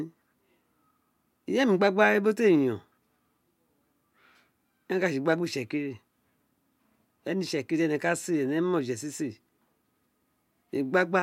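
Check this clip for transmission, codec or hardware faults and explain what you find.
No faults found in this clip.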